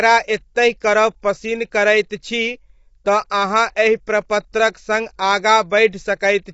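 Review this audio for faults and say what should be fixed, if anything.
The speech sounds rough and grainy throughout, with nothing above 7.7 kHz, likely from low-delay AAC compression (AAC-ELD) at a rate that fits about 24 kbps. Its short frames resolve pitch harmonics poorly and starve each frame of bits. To prevent it, encode at a higher bitrate.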